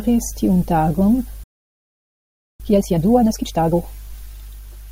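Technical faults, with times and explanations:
1.43 to 2.60 s, playback stall: after "tiun tagon" the speech cuts to silence for about 1.2 s. The player likely ran short of data.
2.60 to 3.76 s, time-compressed catch-up: the speech resumes at double speed, pitch unchanged. Small pieces are cut and cross-faded.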